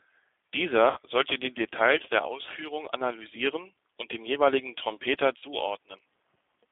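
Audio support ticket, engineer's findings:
G.729 codec, whole clip. Band held to 300 Hz–3.5 kHz. Rough, synthetic speech texture, consistent with an 8 kbit/s G.729 stream rebuilding speech from a filter and sparse pulses.

VoIP packet loss concealed by the speech codec. Fading smear at 0.90–0.97 s, just before "sollte die", then at 5.38–5.44 s. About 60 ms and 40 ms missing, which fits three and two 20 ms packets. Decoder extrapolated the last pitch and filter with falling gain.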